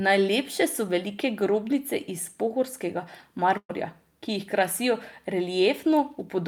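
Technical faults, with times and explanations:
3.57 to 3.71 s, burst of packet loss: right after "velike grobnice iz pohorskega", about 120 ms of consecutive packets never arrived in time, so the receiver stretched the last speech sound into a fading buzz, then briefly went silent before the speech resumed further on, skipping the missing stretch.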